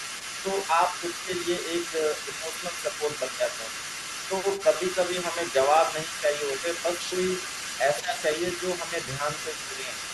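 From the start to the end of the speech, a second voice sits underneath, about 10 dB below the talker. This is the other side's voice leaking through. The far end likely plays on a loudspeaker, and the echo canceller leaves part of it in the microphone.

Speech suppressed in double talk appears five times: 0.43 to 1.3 s, 1.91 to 3.73 s, 4.63 to 4.96 s, 7.8 to 8.23 s, and 8.89 to 9.97 s. The talker's voice dips by a few decibels in short pieces. The deepest dip, at 7.8 to 8.23 s, is about 15 dB. Both sides likely talk at once here, so the canceller turns everything down.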